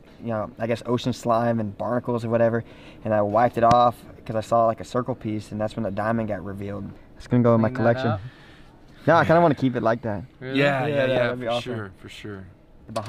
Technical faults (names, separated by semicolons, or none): loud pop